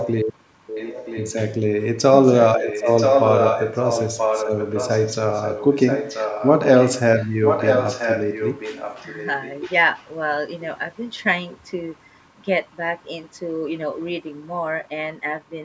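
Speech recording with an echo leak: a copy of the talker comes back just under a second late, at 0 to 0.2, 0.67 to 1.33, 2.25 to 6.95, 7.19 to 9.73 and briefly around 10.0 s. It's loudest in the two long stretches, likely a speakerphone whose echo canceller let it through.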